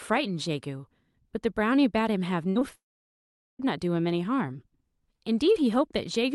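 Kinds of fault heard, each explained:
Burst of packet loss: From 2.49 to 2.57 s, about 60 ms of consecutive audio never arrived in time. The receiver stretched the last sound and let it fade, so a brief held buzz or hiss replaces the missing stretch before the sound jumps ahead.
Short concealed packet loss: Two quick holes of about 20 ms each, at 2.59 to 2.63 s and 2.69 to 2.73 s. The decoder patched each by extending the preceding sound and blending back, leaving a small smear or wobble rather than a clean gap.
Long network dropout: From 2.75 to 3.61 s the speech stops for roughly 840 ms. A short faded tail of the last sound gives way to about 800 ms of silence, and then the audio resumes further on. The likely cause is a stall in packet delivery.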